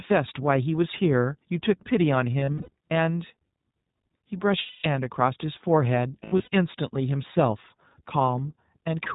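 The whole speech clip passes through the iLBC codec. Its 20 ms frames are each coded on their own. Nothing above 4 kHz survives, so the sound is narrow and muffled. The coding damage is plainly audible. Voices come out rough and slightly synthetic. The roughness fits a rate near 15 kbps.

Lost iLBC frames occur three times. From 2.40 to 2.69 s, about 180 ms goes missing in patches across 280 ms. The longest gap runs around 70 ms. From 4.62 to 4.87 s, 220 ms drops out. From 6.24 to 6.48 s, 160 ms is lost across 240 ms, again with runs near 70 ms. In each gap the decoder repeats the last pitch cycle with added noise. That gives a held, buzzy or breathy vowel. Because frames stand alone, the voice is right again almost immediately afterward.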